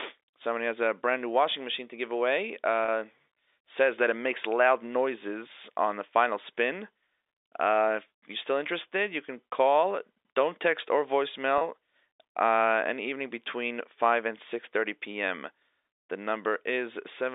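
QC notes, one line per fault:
2.85–2.88 s and 11.58–11.61 s, packet loss with pitch repetition: right after "machine to give away" and again after "text or", the sound briefly holds on a slightly buzzy, sustained tone for about 30 ms before carrying on. Each gap fits one lost packet. The receiver filled it by looping the last pitch cycle and fading it out, so the hold sounds like a frozen fragment, not a silence, through the 300–3,700 Hz telephone band.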